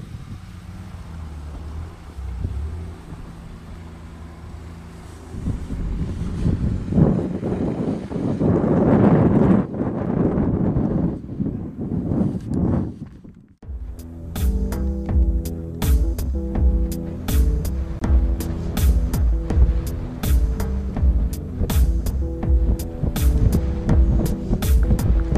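Blocks of digital silence occur at 10.06 s and from 17.99 to 18.01 s. Each time, a stretch of samples drops straight to silence and returns with no fade. The first gap lasts about 6.9 ms and is heard as a single tick. The second lasts about 23.2 ms, which fits a 1024-sample buffer that was not filled in time, and is heard as a brief hole.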